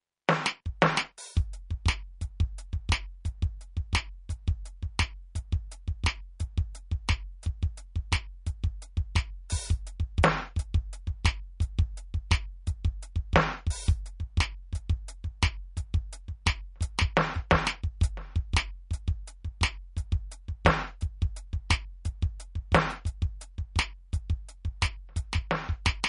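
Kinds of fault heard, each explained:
MP3 compression: The music carries plainly audible codec damage from start to finish, and nothing is present above 10.6 kHz. The likely cause is MP3 encoding at a low bitrate, around 42 kbps. An encoder this short of bits spends them only where its hearing model predicts they matter. It discards the treble above a fixed cut-off and drops quieter spectral detail, leaving the top octave empty and the remaining content coarsely rendered.
Pre-echo: Two sharp attacks, at 16.98 s and 17.50 s, are each preceded by a brief smear of noise spread over about 10 ms. A transform codec distributes quantisation noise across a whole block. When a transient lands late in that block, noise scaled for the loud onset also fills the quiet instant just before it. The result is a short hiss ahead of each hit and a softened attack.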